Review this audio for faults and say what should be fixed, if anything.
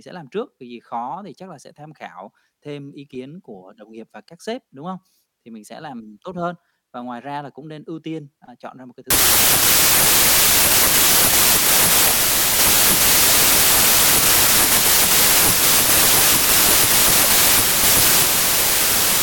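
From 9.10 s to the end of the clip at about 19 s there is a wrong sample width fault. The speech turns into loud, harsh noise with the original buried beneath it, running at 0.75 times normal speed with pitch lowered to match. This fits 32-bit integer data being read as packed 24-bit. Many output samples are assembled from bytes belonging to neighbouring samples, so only fragments keep the true high-order bits. Reading four bytes as three also yields more samples, which slows playback. To prevent this, carry the sample format in the file header or stream metadata and have the reader validate it rather than assume a fixed width.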